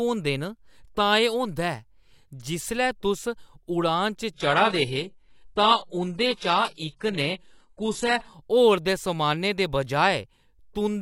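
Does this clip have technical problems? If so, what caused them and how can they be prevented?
Yes. An adaptive stream at a lower bitrate runs from 4.34 to 8.34 s: the speech turns suddenly duller and more artefact-laden, with nothing above 11.5 kHz, then returns to full quality without any gap. This points to the connection slowing and the player switching mid-stream from a high-quality AAC version to a very low-bitrate one, likely around 12 kbit/s HE-AAC. Preventing it means securing steady bandwidth or setting a higher minimum quality for the stream.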